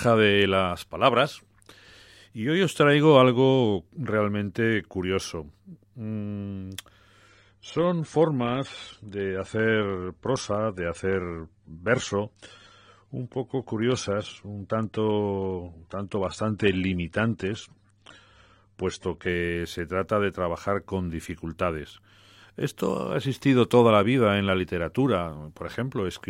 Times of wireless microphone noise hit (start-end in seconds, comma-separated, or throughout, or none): none